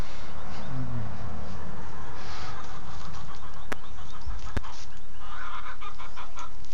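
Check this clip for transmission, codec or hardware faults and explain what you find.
Two loud pops, at 3.72–3.75 s and 4.57–4.59 s: likely brief voltage pulses from a switch or static, each a sharp click a few dB above the ongoing sound.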